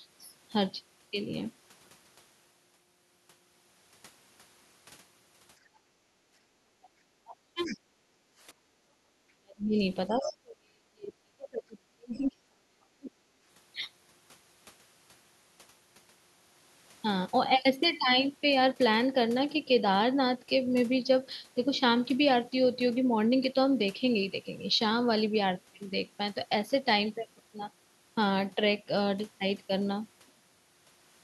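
From 5.61 to 6.61 s, and again from 8.06 to 9.12 s, the room background is gated by the echo canceller. While the far end plays through the loudspeaker, the canceller pulls the microphone down, by about 11 dB and then about 13 dB, for most of each span. The ambience sinks and then recovers.

Between 6.82 and 6.89 s a second voice leaks through, very faint. It returns from 7.65 to 7.76 s, much more noticeable, and again from 10.23 to 10.28 s as a brief faint scrap. This is the other side's voice leaking through, likely loudspeaker echo the canceller failed to remove. It is a separate voice appearing, not a drop in level.

From 7.24 to 7.78 s, and from 9.4 to 13.16 s, the talker's own speech is suppressed in double talk. The voice drops deeply and in pieces, nearly to silence through much of the longer span, likely while the other side speaks at the same time.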